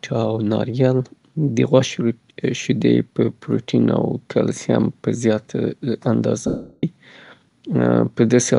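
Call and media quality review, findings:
Dropout 6.47–6.83 s, 360 ms: lost LE Audio frames. Decoder concealment repeats last spectrum with randomised signs, then fades, so speech smears into noise and decays toward silence. Duration fits about 36 missing 10 ms LC3 frames.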